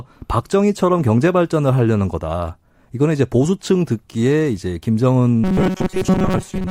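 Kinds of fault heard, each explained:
Robotic sound from repeated short buffers: from 5.44 s, the speech becomes a rigid metallic buzz at 188 Hz, likely from an approximately 5 ms chunk replayed through most of that stretch. Spectrogram: harmonics locked 188 Hz apart. Waveform: identical repeating cycles.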